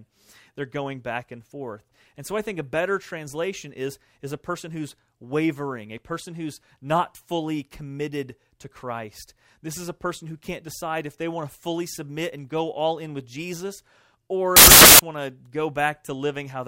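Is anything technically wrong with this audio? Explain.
Yes. From 14.56 to 14.99 s, about 0.43 s of the speech turns into samples built from the wrong bytes. The decoder assembles each sample from misaligned or swapped bytes, so the rapidly varying low-order bits end up as the most significant part of every value. The result is a burst of loud, harsh broadband noise. The waveform jumps sharply in level, dense and jagged, and the spectrogram shows a flat, bright band across all frequencies for that span.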